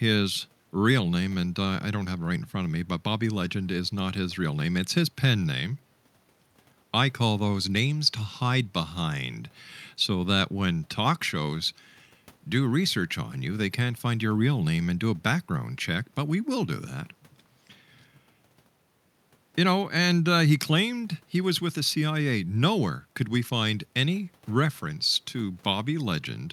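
Listening to this speech recording, nothing technical stood out at any point.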